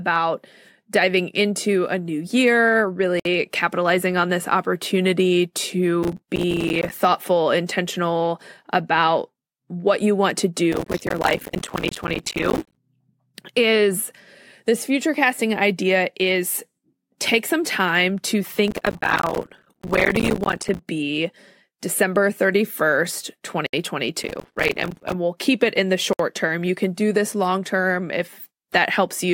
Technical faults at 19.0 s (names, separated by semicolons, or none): processor overload crackle